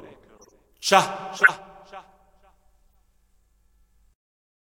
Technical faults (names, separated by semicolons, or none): corrupt frame decoded